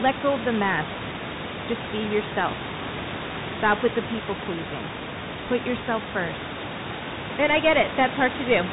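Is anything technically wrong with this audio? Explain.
Yes. Throughout the speech, the sound carries the marks of a Bluetooth CVSD headset codec. This codec sends a single up-or-down bit per sample and adapts its step size, which fits a 64 kbps link. Nothing above 4 kHz survives. Loud, fast-rising sounds outrun the step and distort, s sounds turn scratchy, and a granular hiss sits under the speech. That hiss and the slope-overload grit set it apart from a plain low-pass band limit, which would sound dull but clean. The room noise, about 11 dB below the speech, belongs to the recording.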